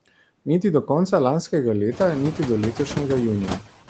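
Noise suppressor artifacts run through the whole clip. The suppressor estimates the steady room noise in each frequency band and pulls those bands down frame by frame, by about 17 dB here, so the background drops away in the gaps and swells back underneath the speech. The room noise rises by about 12 dB around two seconds in, sitting about 13 dB below the speech.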